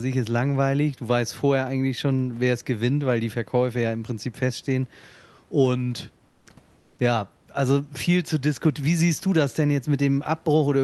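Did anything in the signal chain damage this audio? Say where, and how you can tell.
Yes, at the call-processing and codec stage: comfort noise in place of the background, twice, from 6.27 to 6.45 s and from 6.79 to 6.97 s, each lasting 180 ms. In those pauses the real room background, sitting about 39 dB below the loudest speech, gives way to a smooth, featureless hiss about 4 dB and then about 2 dB quieter. On a spectrogram these show as uniform, detail-free patches, and the waveform shows a small level step at each edge. The likely cause is Opus discontinuous transmission, where the receiver synthesises noise while the sender is silent.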